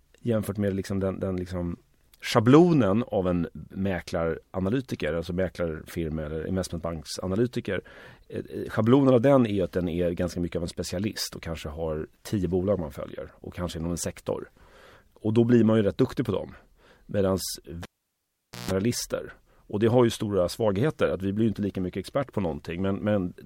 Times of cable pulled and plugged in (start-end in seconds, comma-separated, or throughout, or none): 17.83-18.71